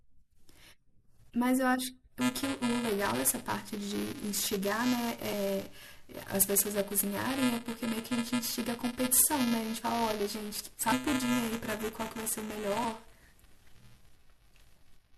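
Buffer tearing runs from 2.21 s to the end of this speech recording as a steady robotic buzz at 375 Hz, which fits a 128-sample buffer. The writer and reader have drifted, so a small slice of each buffer replays audio a few milliseconds old, hard-joined on both sides. Compressed frames skipped occur at 5.32 s, 10.91 s and 12.83 s. The audio jumps forward by whole 24 ms frames, losing about 150 ms, then about 100 ms twice.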